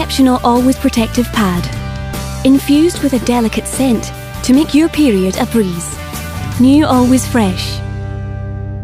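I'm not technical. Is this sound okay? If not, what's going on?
No. Mains hum starts at 6.37 s and runs to 8.83 s: a steady low 50 Hz drone. Electricity from the power supply is leaking into the recording, through a ground loop in the cabling or a nearby transformer.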